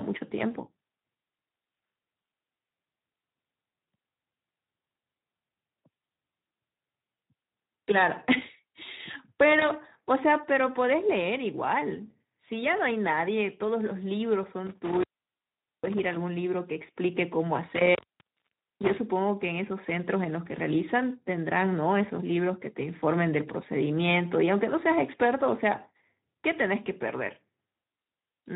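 Speex codec damage runs through the whole recording: at a low setting, consistent with roughly 11 kbps, the CELP coder has too few excitation bits, so the speech sounds noisy and hoarse. VoIP packet loss concealed by the speech codec occurs at 9.59 to 9.65 s, where the decoder bridges a 20 ms gap by extrapolating its last pitch and filter, leaving a brief, fading smear. Intermittent contact at 14.67 to 16.16 s and again at 17.75 to 18.99 s is a loose connection opening for about 0.80 s and 0.86 s, cutting the sound out with crackle at the edges.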